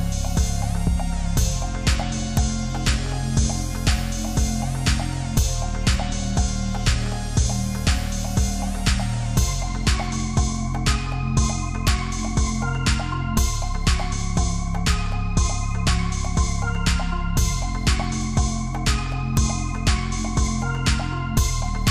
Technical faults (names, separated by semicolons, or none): integer overflow